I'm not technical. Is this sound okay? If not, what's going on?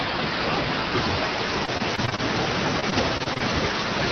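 No. Repeated packet loss (robotic sound), 1.65–2.20 s and 2.80–3.42 s: brief chunks kept going missing, each patched by repeating the last sound, so it turns choppy and robotic.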